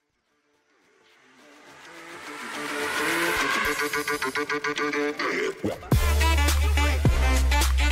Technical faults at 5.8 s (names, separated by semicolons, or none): none